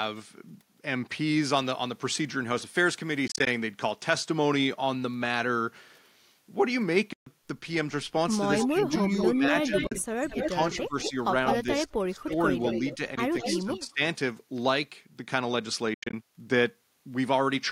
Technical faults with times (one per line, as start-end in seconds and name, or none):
3.27-3.47 Bluetooth dropout
7.13-7.27 Bluetooth dropout
8.61-13.79 echo leak
8.68-9.74 speech suppressed in double talk
9.87-9.92 Bluetooth dropout
10.33-12.32 speech suppressed in double talk
12.97-14.01 speech suppressed in double talk
13.15-13.18 Bluetooth dropout
15.94-16.14 Bluetooth dropout